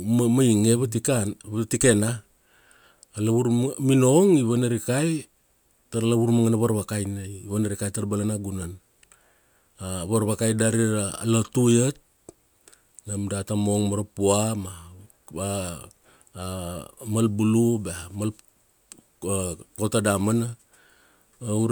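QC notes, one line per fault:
Nothing to flag here; the speech comes through without any trouble worth a QC line.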